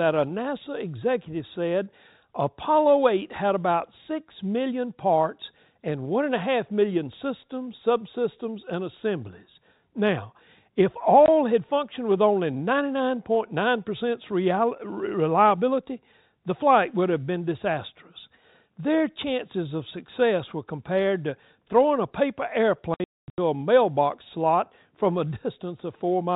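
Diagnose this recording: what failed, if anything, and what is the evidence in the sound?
The fault is packet loss filled with silence, at the network stage. A 20 ms hole at 11.26–11.28 s falls just before "had functioned with only". Between "to throwing a paper" and "a mailbox slot from", about 380 ms drops out in gaps scattered over 22.94–23.38 s, the longest run 240 ms. All the gaps fit 20 ms packets. On a waveform these are flat silent stretches with abrupt edges; a spectrogram shows blank vertical columns cutting through the telephone band below 4 kHz, which the G.711 path carries normally.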